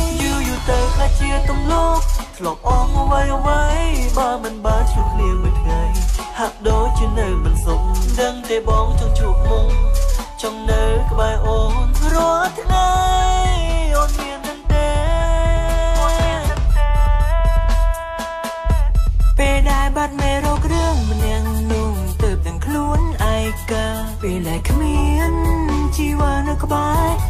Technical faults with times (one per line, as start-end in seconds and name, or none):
2.30 dropped buffer (overrun)